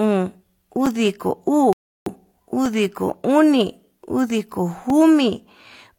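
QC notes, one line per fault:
0.86 s, 2.66 s and 4.90 s: block of digital silence. The speech drops to silence for about 5.8 ms, 1.4 ms and 2.9 ms, then returns. The signal jumps to silence and back with no fade. These holes are too short to hear as gaps and come across as ticks. The 5.8 ms and 2.9 ms lengths fit 256-sample and 128-sample buffers, which suggests the output buffer was not filled in time.
1.73–2.06 s: rebuffering stall. Playback halts for about 335 ms, then the speech resumes exactly where it left off. No audio is lost, but the pause adds that much time to the clip. This is what happens when the player runs out of downloaded audio and waits for more to arrive. The hard stop and restart make this pause sound abrupt rather than like a natural break in the speech.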